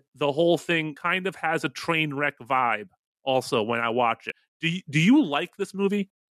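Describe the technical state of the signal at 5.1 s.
At 5.1 s the speech signal is intact, with no audible technical fault at that moment.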